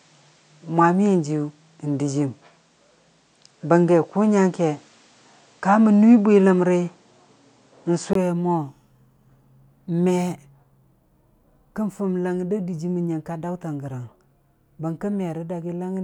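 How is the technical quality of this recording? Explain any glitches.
The recording has one glitch. From the start until 8.15 s, the speech sounds duller and boxy, with nothing above 9.1 kHz and a background floor near 40 dB down. It is likely an input switched to a poorer device. At 8.15 s a 20 ms gap appears, then the full band returns, about 5 dB different in level. A spectrogram shows a flat ceiling that lifts at the switch, and the waveform shows a brief dropout there.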